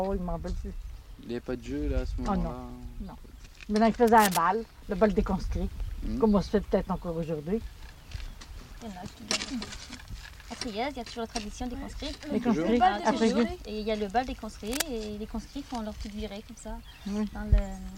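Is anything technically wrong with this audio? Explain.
Yes. Cable scratch noise appears twice, from 4.07 to 4.39 s and again from 14.66 to 14.83 s. Each burst is a dense, uneven rush of scratchy rustling that sits only a little below the main sound, about 5 dB under it. The likely cause is a worn cable, connector or control being moved, with its contact resistance fluctuating rapidly. Unlike a single digital click or a dropout, each event is a short, irregular stretch of grainy noise laid over the audio, which keeps going underneath.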